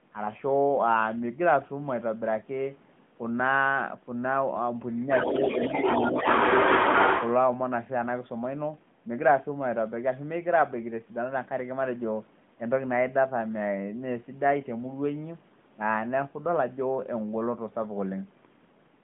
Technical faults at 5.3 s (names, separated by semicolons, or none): other side's voice leaking through